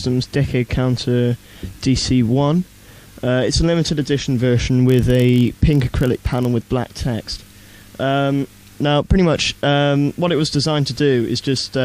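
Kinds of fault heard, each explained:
Block size mismatch (padded): one stage hands over blocks a touch shorter than the next one reads, so a sliver of silence pads each block. From 4.87 to 6.46 s that gives a buzz at about 43.1 Hz, fitting 1024-sample reads, while playback speed barely shifts (0.999x).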